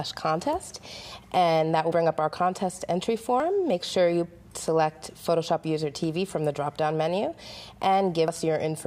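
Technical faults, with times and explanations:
1.92 s, 3.40 s and 8.28 s, dropped buffer (overrun): each is the sound jumping ahead, about 40 ms missing at the first two and about 70 ms at the last. There is no gap of silence, which sets it apart from a dropout, likely because samples were overwritten before being read.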